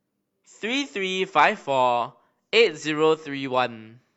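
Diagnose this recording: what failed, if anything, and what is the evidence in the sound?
Nothing failed: no stage from capture through to playback leaves any audible defect anywhere in the speech.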